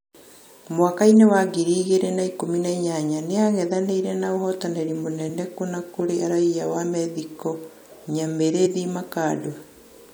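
From 4.39 to 4.85 s there are CD scratch ticks: four short clicks, the longest about 0.7 ms. A surface blemish passes the laser once per disc revolution, and the player patches over samples its error correction cannot rebuild.

At 8.65 to 8.74 s, compressed frames are skipped. Some encoded frames were lost or rejected as corrupt, so playback jumps forward by around 70 ms.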